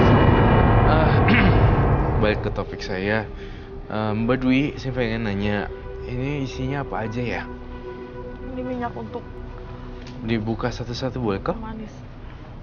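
From 8.86 to 9.63 s there are CD scratch ticks: four short clicks, roughly five per second, each well under a millisecond. A disc blemish exceeds error correction on each rotation, so the player interpolates or mutes the damaged samples.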